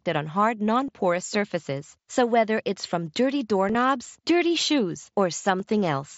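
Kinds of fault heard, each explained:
Concealed Bluetooth headset packet loss: lost headset packets get patched with recycled waveform, giving brief buzzy blips before "porous surfaces", before "dirty shoes" at 3.7 s, and after it at 5.59 s.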